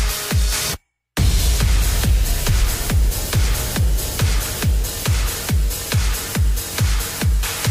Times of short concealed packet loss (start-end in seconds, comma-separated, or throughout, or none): none